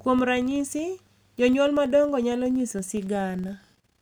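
The filter is restarted on every block, so this speech carries a 21.5 Hz ticking buzz throughout that follows its level, fitting 2048-sample blocks.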